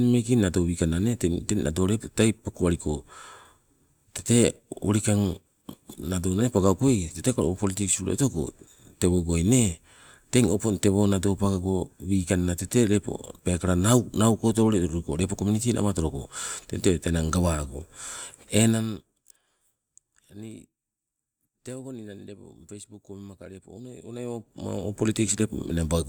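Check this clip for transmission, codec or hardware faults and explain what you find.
Nothing stood out on listening to this speech recording; no transmission, codec or hardware problem could be heard anywhere in it.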